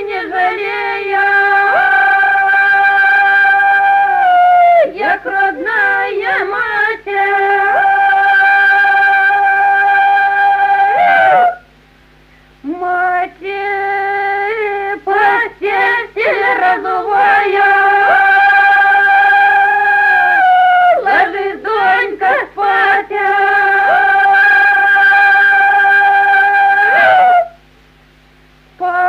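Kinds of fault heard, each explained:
No faults heard.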